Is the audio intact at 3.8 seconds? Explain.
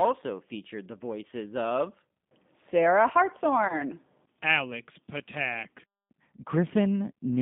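No. From 3.68 to 3.80 s there is VoIP packet loss concealed by the speech codec. About 20 ms went missing, which fits a single lost packet. The decoder extrapolated from its last pitch and filter, so the sound becomes a fading buzzy tone or coloured noise and stays weak as it recovers. On the waveform this shows as a smoothly decaying patch.

Underneath this, the G.729 codec at 8 kbit/s makes plainly audible damage, leaving the sound slightly rough and synthetic. Its spectrogram is confined to roughly 150 Hz to 3.6 kHz.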